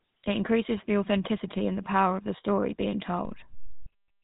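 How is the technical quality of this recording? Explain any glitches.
The recording has two technical faults: plainly audible codec damage throughout and one offset step near the end.

For the whole clip, the speech carries GSM full-rate codec artefacts. The codec models the vocal tract and excites it with a sparse, regularly spaced pulse train, and its character fits the 13 kbps full-rate coder. Nothing passes above 3.8 kHz, so the speech sounds plainly buzzy, gravelly and band-limited.

At 3.25 s a DC step occurs. The waveform's zero line jumps to a new offset and stays there until the end, much like a converter recalibrating or an offset input being switched in. It is heard as a low thump at the onset, while the speech itself continues unchanged.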